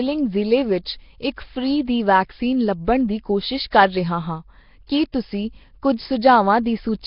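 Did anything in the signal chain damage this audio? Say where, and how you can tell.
Yes, and it's the codec stage. The whole clip has a rough, hissy halo and a smeared, underwater quality, with nothing above 5.3 kHz, and the damage is heavy. That points to Nellymoser compression, likely Nellymoser Asao at a bitrate around 22 kbps. It codes short blocks at a fixed, very low bit budget, so weak bands get starved and filled in with noise, which gives that grainy, watery texture.

The same codec leaves pre-echo in two spots. There's a brief hiss from 4.87 to 4.89 s, spread over 22 ms, right after "ਕੋਸ਼ਿਸ਼ ਕਰ ਰਿਹਾ ਹਾਂ" and before "ਕੀ ਤੁਸੀਂ". Another, 15 ms long, sits at 5.12 s just after "ਕਰ ਰਿਹਾ ਹਾਂ ਕੀ". When an attack lands late in a block, quantisation noise sized for the loud part bleeds into the quiet moment before it, so the onset is smeared.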